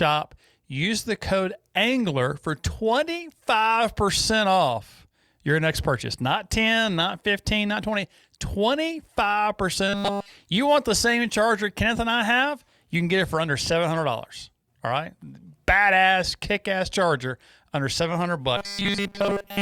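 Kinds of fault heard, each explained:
Robotic sound from repeated short buffers: twice, near 10 s and in the last second, the speech turns into a rigid metallic buzz locked at 200 Hz, likely because one 5 ms slice keeps repeating. Unlike a dropout, the sound never falls silent.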